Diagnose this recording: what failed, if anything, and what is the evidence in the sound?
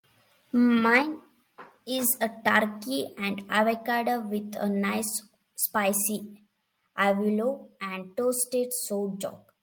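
Around 0.95 to 0.98 s there's a short burst of harsh crackle on a loud peak in the speech, and it sounds like microphone overload at the converter stage. The input was driven about 2 dB past full scale, so the tops of the waveform get flattened, only a small fraction of samples, but enough to give that gritty edge. The likely cause is mic input gain set too hot going into the ADC.

Right after that, at 1.02 s, the whole level drops by about 5 dB in one step. Voice and background fall together, so the source didn't just get quieter. This is the microphone volume stepped down, and it sits in call processing: the software's automatic gain control likely saw the clipped peak a moment earlier and pulled the device input level down to stop it happening again.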